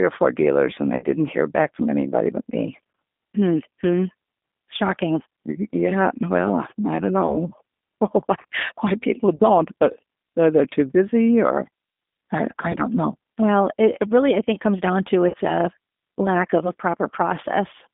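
Speech carried over a narrowband G.729 voice codec, consistent with an 8 kbit/s G.729A link, rebuilds each frame from a vocal tract model and a few pulses, so the audio is confined to roughly 200 Hz to 3.6 kHz with plainly audible rough, synthetic coding damage throughout. Separately, VoIP packet loss concealed by the speech codec occurs five times. Lost packets forced the decoder to extend its last pitch and filter at falling gain, smearing the sound into a decaying tone or noise at 0.96–1.05 s (about 60 ms lost), 7.26–7.37 s (20 ms), 9.36–9.44 s (40 ms), 12.72–12.77 s (20 ms) and 15.29–15.36 s (40 ms).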